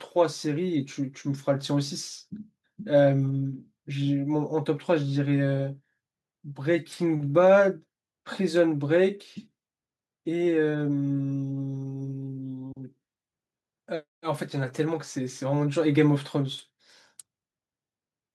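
No technical faults can be heard in this recording.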